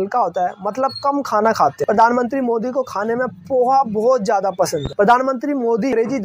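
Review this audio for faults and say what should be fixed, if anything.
There's one loud pop, from 4.86 to 4.89 s, poking a few dB above the sound, likely a voltage spike from a plug, switch or static discharge. Fix it by securing connections and muting before switching anything.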